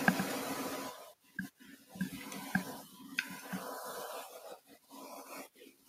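From 0.82 s to the end, the noise suppressor cuts the speech, mistaking quiet parts for noise and pulling them down by up to 18 dB for around four seconds in total, so those parts sound swallowed, with room noise sitting about 21 dB under the speech.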